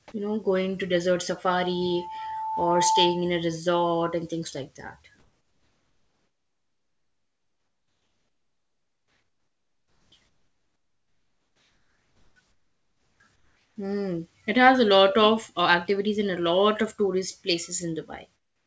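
From 1.63 to 3.39 s, between "know going to desert" and "resort and things like", a loudspeaker feedback squeal at 881 Hz swells over about one and a half seconds until it rises above the speech. A microphone is picking up its own loudspeaker, and the loop gain exceeds one at that frequency.

In the pauses at 5.20 to 10.12 s, 10.28 to 12.36 s, 12.52 to 13.20 s, 13.36 to 13.76 s and 18.36 s to the end, the background turns flat and featureless and drops by about 5 to 12 dB. This is comfort noise in place of the background, likely from discontinuous transmission substituting synthetic noise during silence.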